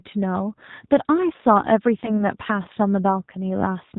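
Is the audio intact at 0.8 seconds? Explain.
No. At 0.8 s, as throughout the clip, the speech carries plainly audible G.729 codec damage, consistent with an 8 kbit/s stream. It is rebuilt from a vocal tract filter, a pitch predictor and sparse pulses, so it sounds rough and synthetic. A spectrogram shows nothing above 4 kHz.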